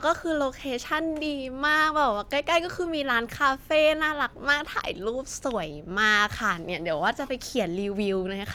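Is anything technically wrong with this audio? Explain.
No, no technical faults heard.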